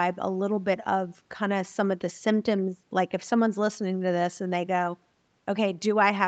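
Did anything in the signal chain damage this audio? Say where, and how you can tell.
No, nothing in the chain has damaged this speech. It has passed through call microphone processing and an Opus call codec whose bandwidth is limited, with nothing above 8 kHz, and its coding character fits a rate of around 48 kbps.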